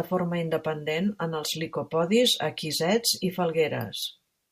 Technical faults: none

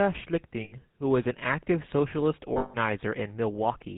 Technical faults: GSM full-rate codec; lost GSM frames

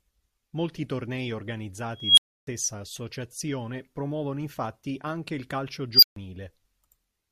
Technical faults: unstable filter

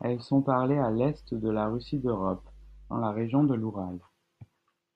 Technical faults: mains hum

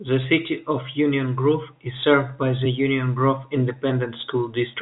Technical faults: sample clock jitter

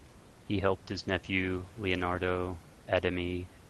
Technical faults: channel delay (comb filtering)

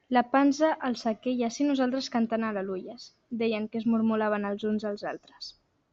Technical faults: none

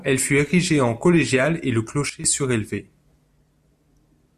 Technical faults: sudden gain jump

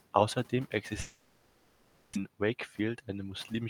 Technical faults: long network dropout; jitter buffer speed-up

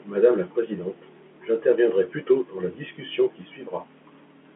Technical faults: none

